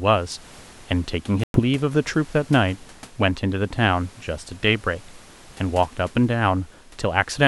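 From 1.44 to 1.60 s the speech cuts to abrupt silence and resumes further along, not where it stopped, likely a Bluetooth dropout of late wireless packets.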